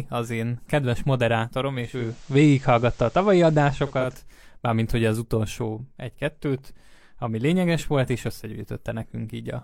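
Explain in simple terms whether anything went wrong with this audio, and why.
From 1.72 to 4.26 s, hiss appears and the volume shifts. This is digital radio blending to analogue: the receiver lost digital reception and faded to FM.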